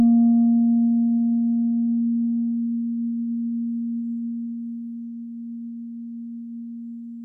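Music that plays throughout at half speed, an octave low. A classic stereo read as mono fault: interleaved left and right samples were played back one after another as a single channel.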